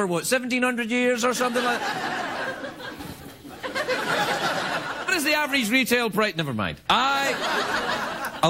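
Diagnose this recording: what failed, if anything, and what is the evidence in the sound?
A stream segment skipped, likely at the network-to-playback stage: one segment failed to load and the player carried on with the next. At 5.07 s the sound jumps ahead abruptly with a small blip, and part of the programme is missing.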